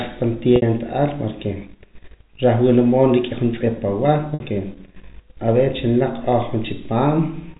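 Speech over a G.711 telephone line drops packets twice, at 0.56–0.62 s and 4.34–4.40 s. Packet loss with pitch repetition bridges each 60 ms gap, which fits three 20 ms packets, so the last pitch cycle loops as a brief buzzy hold, fades out, then cross-fades back.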